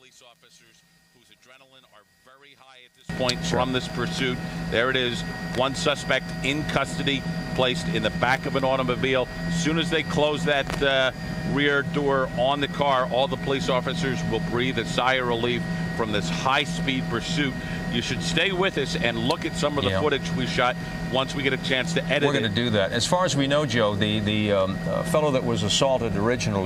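From the start to 3.09 s the sound collapses to a faint remnant, about 29 dB below where it sits afterwards, before returning to full level. The likely cause is one channel inverted: with one side of the stereo pair in reversed polarity, material common to both channels cancels when they are summed to mono, so centred content and low end nearly disappear and only the small difference between the channels survives.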